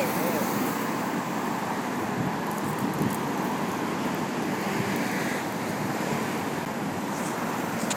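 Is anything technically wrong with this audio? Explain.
Yes. There is a CD skip at 6.65 s. The laser has slipped to another turn of the disc's spiral. Playback mutes for only a few milliseconds, then resumes elsewhere. You hear a brief tick, and the sound jumps abruptly.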